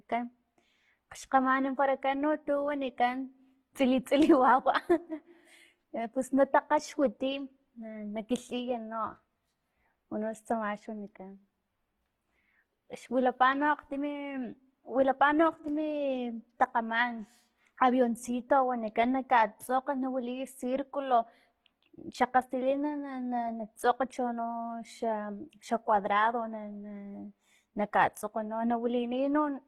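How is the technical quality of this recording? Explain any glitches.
The quality is held back by plainly audible codec damage across the whole recording. From start to finish the speech sounds rough and grainy, with a noisy, sandy texture laid over the voiced sounds instead of clean tones. The top end stays present, so it isn't muffled, but the detail in it sounds noisy and grainy. This is likely Opus compression in its music (CELT) mode at a bitrate that fits around 16 kbps. Short of bits, the encoder preserves each band's overall energy but fills the fine structure with folded copies of lower bands or with noise, producing that grain rather than dull or hollow gaps.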